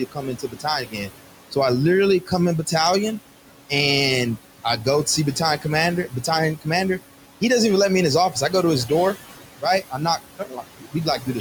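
Throughout, the background pumps down between phrases and swells back under them, leaving a residue: noise suppressor artifacts. The suppressor pulls bands it judges to be steady noise down by about 18 dB frame by frame, so the room noise, sitting about 12 dB below speech, keeps reshaping itself.

Parts of the speech itself sound swallowed or faint from 0.0 to 1.11 s, 2.21 to 2.33 s, 4.37 to 5.65 s, 6.09 to 6.67 s, 8.3 to 8.53 s and 9.62 s to the end. This is speech cut by the noise suppressor, which mistook soft sounds for noise and turned them down by about 10 to 19 dB. The opening and closing stretches lose the most, about 1.0 s and 0.7 s respectively.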